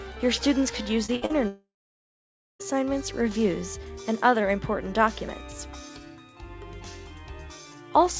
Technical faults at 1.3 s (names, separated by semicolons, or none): burst of packet loss; short concealed packet loss